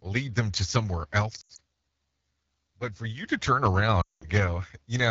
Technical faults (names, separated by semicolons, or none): AMR wideband (HD Voice) codec; lost AMR speech frames